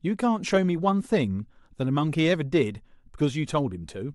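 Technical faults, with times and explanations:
No technical faults can be heard in this speech clip. Nothing in the signal path stands out at any point.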